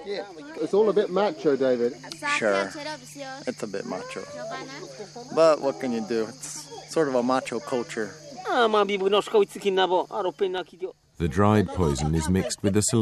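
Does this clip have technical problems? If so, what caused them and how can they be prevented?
Yes. Dropped samples are the likely cause: the stream briefly loses a fraction of a millisecond of data, so the waveform jumps abruptly to a later value. This produces a single sharp click at 4.28, 10.58 and 12.03 s, each far too short to remove any sound. Larger buffers and a steady processing load keep the stream from skipping samples.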